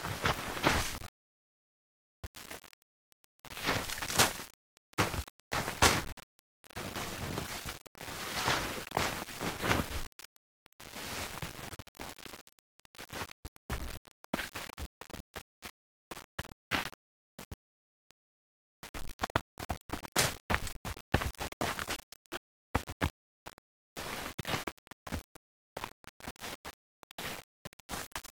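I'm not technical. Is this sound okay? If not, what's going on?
No. From start to finish the sound has a grainy, gritty edge, worst in quiet moments. That is low bit depth without dither, likely from rounding to about 6 bits.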